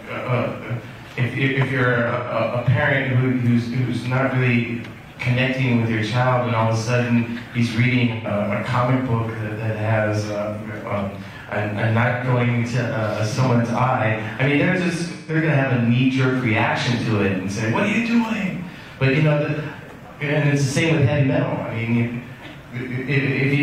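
AAC frame loss with concealment occurs four times. From 1.93 to 2.3 s, 213 ms of data is lost in scattered runs, the longest roughly 150 ms. Two more losses follow, at 8.11 to 8.28 s and at 12.08 to 12.23 s, each 128 ms. The last runs from 15.11 to 15.35 s and lasts 171 ms. Each time, the decoder fills the gap from the last good spectrum. The sound turns smeared, noisy and phasey, then returns.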